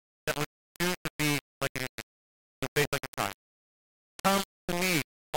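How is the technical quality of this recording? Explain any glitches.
Poor: the speech carries heavy, constant distortion from start to finish.

Low bit depth without dither, throughout: the signal was likely reduced to about 3 bits and rounded to the nearest step with no dither, leaving only a handful of levels. The resulting error tracks the speech rather than sitting as steady hiss, so the whole clip sounds harsh and grainy, with the distortion nearly as loud as the speech itself. Quieter syllables break up into a gritty buzz or sputter between steps, and the softest moments collapse to silence.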